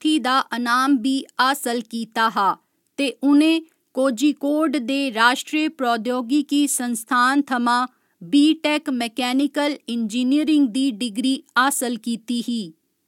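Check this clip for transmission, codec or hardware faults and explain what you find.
Nothing in the speech gives any audible sign of a fault, so there is nothing to report.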